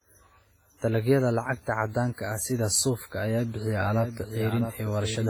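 Throughout the speech there is heavy codec damage with a ringing, washy quality and a hiss that rises and falls with the signal. This is likely WMA compression from an early transform encoder, and the damage points to a low bitrate, around 24 kbps. Long transform blocks smear quantisation noise over tens of milliseconds around each sound, and the scarce bits leave weaker spectral components zeroed, which gives the hollow, smeared texture.

From 3.68 s to the end, a second full-band copy of the speech runs underneath, trailing the original by roughly 0.7 s and about 10 dB quieter. It enters abruptly, with no decay or room colouring, so it reads as a doubled audio track rather than an echo. The likely cause is the same audio being mixed in twice, either captured again through a slower path or held as two misaligned copies in an edit.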